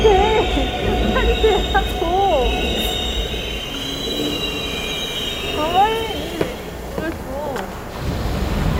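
No technical faults can be heard at any point in the recording.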